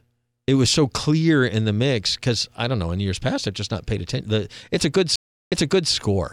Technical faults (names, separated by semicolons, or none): stream reconnect